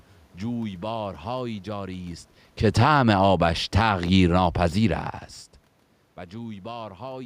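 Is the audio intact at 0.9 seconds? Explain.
Yes, the audio is intact at 0.9 seconds, with only the room's own background noise present as part of the recording.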